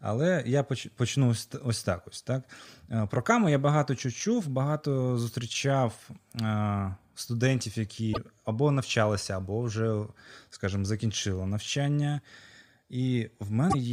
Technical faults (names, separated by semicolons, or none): broken MP3 bit reservoir